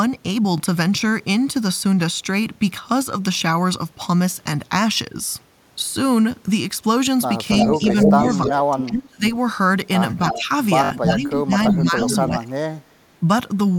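At 0.58 to 0.60 s and again at 3.39 to 3.41 s there is Bluetooth stutter: a single slice of roughly 20 ms is replayed while the receiver waits for data, giving a brief hiccup. The sound then resumes further along, not where it paused, which distinguishes it from a plain dropout.

From 7.55 to 8.83 s an echo leak appears: a copy of the audio returns about 320 ms late, nearly as loud as the original, likely because a loudspeaker echo slipped past the canceller. The fixed delay, rather than smeared decay, separates it from room reverberation.

Overlapping this, from 7.55 to 9.25 s, the main voice is speech suppressed in double talk, likely because the canceller ducked its own talker along with the loudspeaker echo. The voice dips by as much as about 25 dB in pieces, for about a second in total. Unlike packet loss, these are uneven level drops and thinning, not clean gaps.

A second echo leak runs from 10.28 to 11.13 s at about 323 ms delay, roughly 5 dB below the speech. 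Suppression in double talk returns from 10.34 to 12.62 s, with drops of about 20 dB over about a second and a half. Within that stretch, at 10.84 to 10.91 s, a longer Bluetooth stutter of 61 ms repeats the buffered slice several times into a short buzz, which fits about three lost packets.

The echo leak then recurs from 11.67 to 12.16 s at about 325 ms delay, about 10 dB down, and finally from 12.71 to 13.20 s at about 326 ms delay, about 40 dB down and barely audible.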